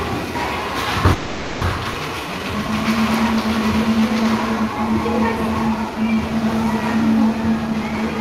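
From 1.13 to 1.63 s there's a call audio freeze: the last bit of sound gets stretched into a fading buzz for about half a second, with nothing dropped, and then it picks up where it left off. That's likely packets stalling in transit and the jitter buffer running dry.

Right after, at about 1.93 to 1.96 s, comes a skip ahead. Roughly a fifth of a second of audio just vanishes, and the two sides are stitched together with barely a gap. That's a stretch of audio dropped while later audio was already waiting.

Then there are two jitter buffer slow-downs. From 2.15 to 2.69 s playback runs at 87% speed, and from 5.34 to 6.82 s at 95%. Each adds 76 ms by repeating tiny slices over and over. The pitch holds, but things feel drawn out.

Finally, from 7.49 to 8.17 s, there's a jitter buffer speed-up at 119%. The receiver trims short pieces repeatedly, cutting around 150 ms to shed excess delay, so the sound comes across rushed at the same pitch.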